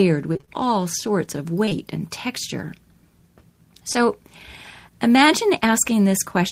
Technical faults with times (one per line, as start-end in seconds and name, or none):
0.33-0.49 repeated packet loss (robotic sound)
1.69-1.73 short concealed packet loss
3.93-3.97 short concealed packet loss